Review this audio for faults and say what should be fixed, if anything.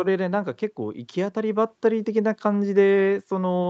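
Automatic gain rising from 0.77 to 2.36 s: the gain control judged the input too quiet and ramped its gain up by about 6 dB, so the speech and background noise swell together, within the 8 kHz band of the Opus call path. Set a correct input level beforehand so the AGC has no reason to adjust mid-call.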